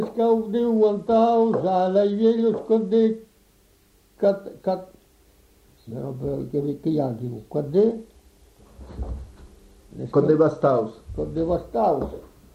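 Bluetooth SBC bit pool drops at 0.77–3.17 s and 7.79–11.52 s: the treble dulls and gritty noise rises, as a congested link starves the codec, leaving upper sub-bands empty and the rest coarsely quantised, which fits a fall from bit pool 28 to 13, near 102 kbps.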